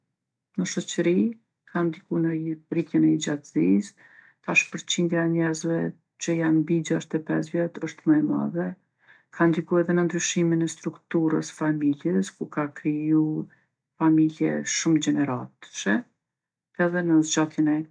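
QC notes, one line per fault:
No faults heard anywhere in the speech.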